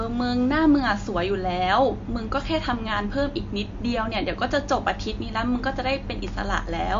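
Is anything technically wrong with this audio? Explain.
Yes. Throughout the speech there is plainly audible damage, likely from MP3 compression at a low bitrate near 49 kbps. The encoder removes all treble above 7.2 kHz and drops weak frequency lines that flicker between frames, giving a watery, swirly tone with chirpy s sounds. A spectrogram shows a hard ceiling at 7.2 kHz and speckled holes below it.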